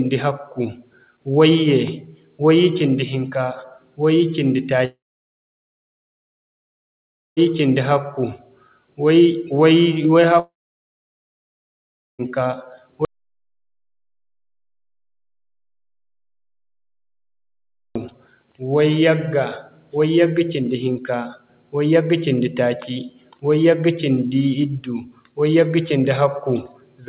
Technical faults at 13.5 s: audio dropout to silence

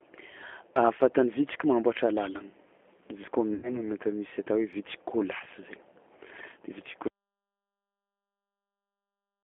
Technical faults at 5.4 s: G.729 codec; VoIP packet loss concealed by the speech codec

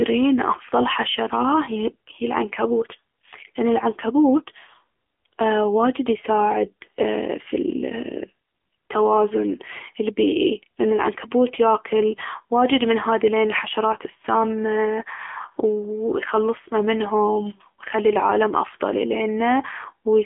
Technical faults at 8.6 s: AMR narrowband mobile codec

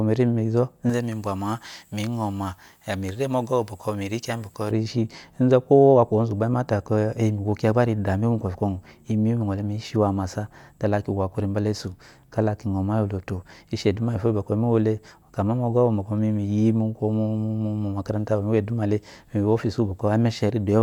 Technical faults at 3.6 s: pre-emphasis left on

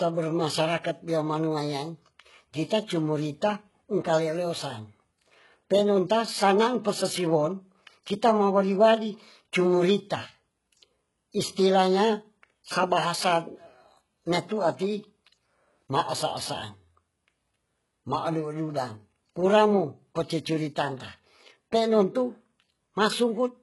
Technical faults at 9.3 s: HE-AAC compression

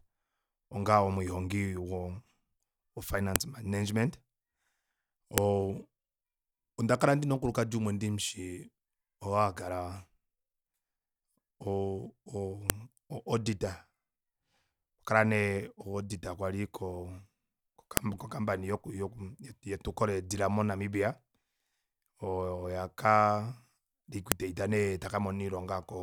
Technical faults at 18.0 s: file header played as audio

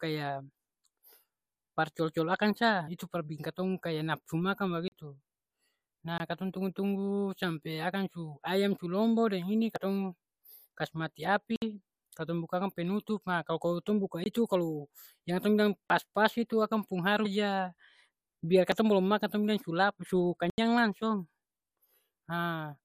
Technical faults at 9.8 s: damaged data in a compressed stream

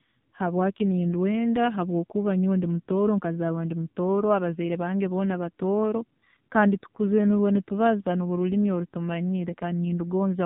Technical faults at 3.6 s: AMR narrowband mobile codec

